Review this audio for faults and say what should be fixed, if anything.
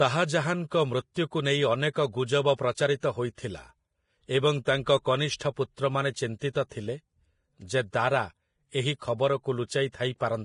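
Throughout the speech, the treble sounds hissy and grainy, and nothing remains above 10.6 kHz. This is likely heavy Vorbis compression, at a bitrate near 30 kbps. Coarse treble quantisation replaces fine detail with noise. To prevent it, encode with Vorbis at a higher quality setting, or keep a lossless copy.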